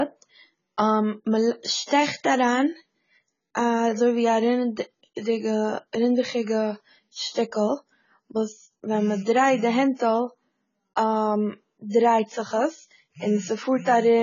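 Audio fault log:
Throughout: AAC compression, the likely cause of the dull, smeared, warbling sound with nothing above 7 kHz; such heavy damage points to a very low bitrate.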